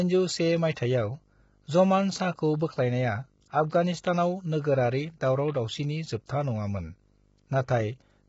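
Video or display buzz runs from start to finish. A screen or video cable has coupled into the audio path, laying a 50 Hz buzz with hash above it under the speech, well below the voice, plus a thin whine at 15.6 kHz from the line scan.

Low-delay AAC compression, likely AAC-ELD, also affects the whole clip. The speech sounds rough and grainy, with noise filling the gaps between harmonics and nothing above 7.7 kHz. The short frames resolve pitch poorly, and the heavy damage fits a bitrate around 16 kbps.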